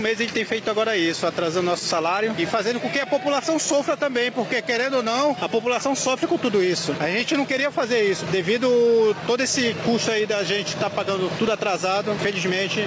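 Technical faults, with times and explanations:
Throughout, gain pumping: the level swells in gaps and dips about 5 dB under each loud sound, unlike steady compression; likely excess microphone gain into a fast limiter.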